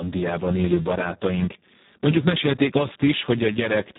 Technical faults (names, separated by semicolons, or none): Speex codec